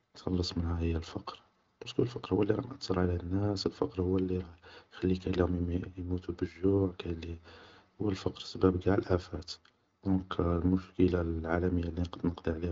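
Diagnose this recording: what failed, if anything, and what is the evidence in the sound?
Nothing failed: the speech has passed through an AMR wideband (HD Voice) path whose content stops at about 7.3 kHz, and its smooth texture fits one of that codec's higher rates, around 18 kbit/s, rather than the rough low-rate modes.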